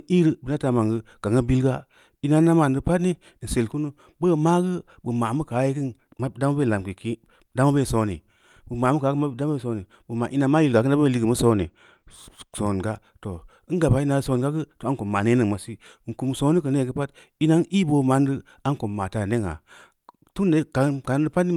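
Channel delay (comb filtering) affects the speech from 11.53 to 12.53 s. One channel runs about two samples late, a tiny fraction of a millisecond, so summing to mono cancels high frequencies. The first notch sits around 10 kHz, leaving the top end dull.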